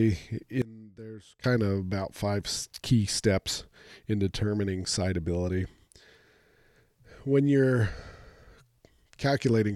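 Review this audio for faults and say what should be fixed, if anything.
From 0.62 to 1.44 s the speech collapses by about 21 dB into a faint residue, recovering just before "of about five key". The likely cause is one channel inverted: with one side's polarity reversed, the centred voice cancels when the channels sum to mono, leaving only their small differences. Unlike a plain gain drop or dropout, the remnant keeps going as a faint copy. Checking polarity on every stereo path and monitoring in mono before release would prevent this.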